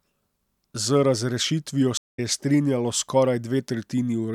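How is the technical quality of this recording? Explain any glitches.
The recording has one glitch, a stream reconnect in the speech between 1.97 and 2.20 s. At that point the audio drops into about 152 ms of silence as the connection fails and the player reopens it. The new decoder picks up mid-stream, so the sound resumes roughly a tenth of a second further on, with that stretch missing, and restarts on "je strinjalo". The first frame after the break comes back faded in.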